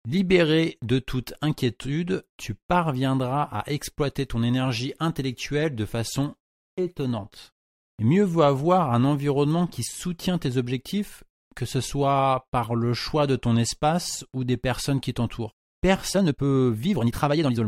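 Software likely compressed the closing stretch of this speech to fit a shorter length, keeping the pitch steady by discarding short slices of the waveform. The time-stretched section starts at 16.08 s, right after "des personnes qui t'entourent", and runs to the end at 17.68 s, at about 1.86 times normal speed. The pace lurches forward abruptly while the pitch stays put, leaving the delivery rushed.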